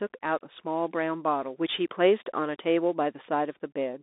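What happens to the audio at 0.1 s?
At 0.1 s the speech carries the Bluetooth CVSD headset codec for the whole clip: one-bit adaptive-step delta coding leaves nothing above 3.8 kHz, scratchy sibilants and granular hiss.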